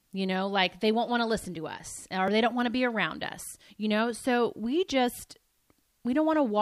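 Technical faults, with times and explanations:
2.28 s and 3.22 s, dropped buffer (overrun): a small forward jump, between "to listen to us" and "they don't want to", then between "want to be around" and "us you know". Each likely comes from a buffer overwritten before capture, so roughly a millisecond or two is lost and the ends are spliced directly.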